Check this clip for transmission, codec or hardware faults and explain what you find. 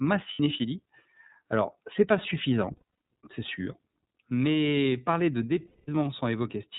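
Two faults are present: iLBC codec coding across the whole speech clip, and lost iLBC frames at three points.

The iLBC codec runs throughout, and its damage is plainly audible. It codes each frame's excitation independently, and its roughness fits 30 ms frames at the 13.33 kbps mode. Nothing passes above 4 kHz, so the speech sounds narrowband, slightly rough and synthetic.

Lost iLBC frames occur at 0.33 s (60 ms), around 2.76 s (210 ms scattered over 300 ms, longest run about a tenth of a second), and at 5.67 to 5.89 s (210 ms). The decoder repeats the last pitch cycle mixed with noise, fading over longer gaps, which produces a held, buzzy, breathy vowel. Because frames stand alone, the speech recovers almost immediately afterward.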